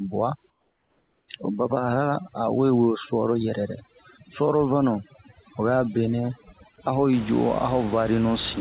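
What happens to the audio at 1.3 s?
At 1.3 s, a steady, featureless hiss, about 4 dB quieter than the real background, gives way as the sound resumes. This is comfort noise in place of the background from 0.5 to 1.28 s, likely because the sender paused transmission and the receiver filled the gap with synthetic noise. There are also twinkling specks in near-silent gaps. That comes from overdone noise removal running from 0 to 7.13 s, just before "i ju", which is suppressing frequency bands near its noise estimate along with quiet speech detail.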